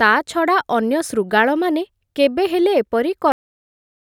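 At 3.32 s the final buffers were never written, a cut-off end: the speech stops mid-sound and drops straight to digital silence with no decay.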